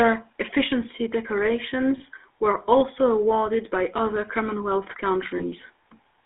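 GSM full-rate codec damage runs through the whole speech clip: the band is confined to roughly 300 Hz to 3.5 kHz, and pulse-driven vocal-tract modelling, consistent with 13 kbps full-rate coding, leaves a plainly buzzy, gravelly roughness. Lost GSM frames occur at 1.98 to 2.01 s and 5.38 to 5.43 s, where the last good frame's settings are repeated, producing a brief metallic ring that fits a single 20 ms frame dropped each time.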